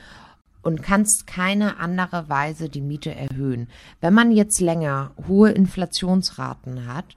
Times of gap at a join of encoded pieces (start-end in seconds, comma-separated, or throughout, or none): 0.41-0.46, 3.28-3.30